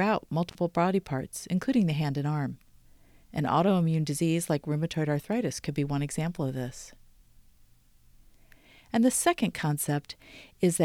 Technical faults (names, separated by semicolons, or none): intermittent contact